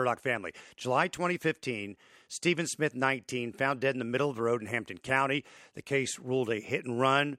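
No technical faults occur at any point in this speech recording.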